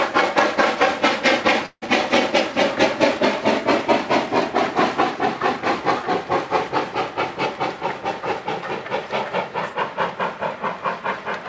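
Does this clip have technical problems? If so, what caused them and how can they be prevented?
Yes. Between 1.66 and 1.84 s there is what sounds like a long network dropout: most likely the packets stopped arriving for roughly 160 ms, so the receiver had nothing to play. It stretched the last sound into a fading buzz or hiss for about 157 ms, then a brief silence, and when the audio resumes that stretch is simply gone. The call path audibly stops at 8 kHz, which fits a wideband codec such as G.722. Using a more stable connection, with forward error correction and a slightly deeper jitter buffer, would help prevent this.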